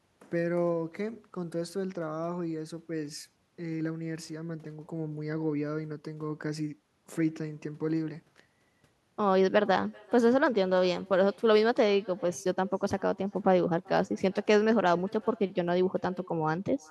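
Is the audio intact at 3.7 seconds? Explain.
No. At 3.7 seconds, as throughout the clip, there is echo with no canceller: the far end plays the call over a loudspeaker, its microphone picks that playback up, and nothing subtracts it before it returns across the network. The result is a faint, thin copy of the speech trailing it by roughly four-tenths of a second, sitting about 27 dB below the direct sound, so each phrase carries a quiet delayed shadow.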